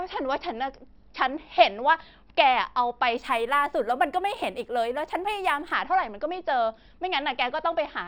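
From 3.17 s to 5.73 s the speech shows imaging from linear upsampling. The top end sounds dulled, and a faint metallic shimmer sits above it, consistent with audio raised from a 12 kHz rate to 48 kHz by straight-line interpolation. That crude filter leaves a mirrored copy of the spectrum in the 6 to 12 kHz range, roughly 30 dB below the signal, which produces the brittle, slightly glassy sheen over that stretch.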